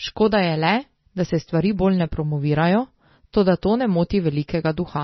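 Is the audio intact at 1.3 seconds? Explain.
No. MP3 compression runs through the whole clip, including 1.3 seconds, likely from encoding at a bitrate around 24 kbps. Short of bits, the encoder cuts the treble at a fixed frequency and drops weak frequency lines, so the speech sounds dull, watery and swirly.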